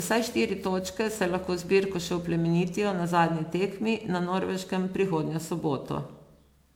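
It's a speech clip with generation loss throughout: swirly, smeared and hollow, with blurred consonant attacks, more damage than a 128 kbit/s MP3 would leave alone. It's likely from being re-encoded around ten times, each pass stacking fresh quantisation noise and spectral holes.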